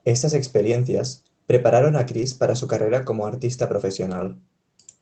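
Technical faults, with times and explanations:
2.17–2.23 s and 4.05–4.27 s: lost packet rebuilt from error correction. Roughly 40 ms and 120 ms sound rougher and noisier because the decoder played low-bitrate backup copies carried in the following packets, so there is no gap.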